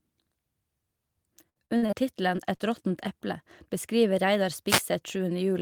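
From 1.49 to 1.94 s this speech turns choppy and robotic, with pieces missing: repeated packet loss, five gaps totalling about 0.2 s, the longest 59 ms. The receiver patched each hole by extending the preceding sound, so concealment fills about 42% of that stretch. Soon after come two brief smears, at 2.36 to 2.40 s and at 2.56 to 2.61 s. These are short concealed packet losses of about 20 ms and 40 ms, bridged by continuing the last sound and blending back into the real audio. At 4.67 to 4.82 s a short swish of static is heard. This is a wireless microphone noise hit, where the FM radio signal faded as reflections cancelled and the receiver's noise rose into that burst.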